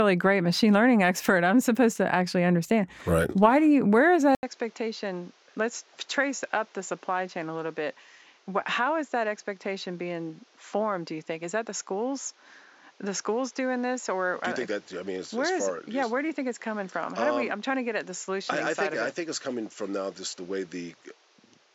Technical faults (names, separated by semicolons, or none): input switched to a poorer device